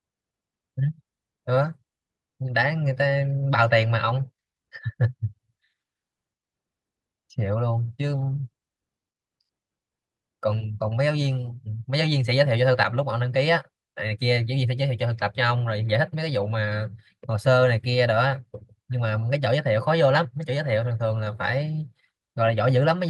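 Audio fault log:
Nothing stood out on listening to the speech in this recording.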